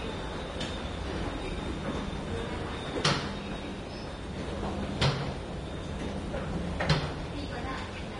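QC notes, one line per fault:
Throughout: Vorbis compression, likely the cause of the audible codec damage. Nothing is present above about 10.6 kHz, so the top end is dull, and the remaining treble is hissy and grainy because the codec quantises the upper residue so coarsely that fine detail turns into noise of similar energy. Tonal parts of the sound come out roughened and attacks are smeared. The degree of damage fits a low bitrate, around 30 kbps.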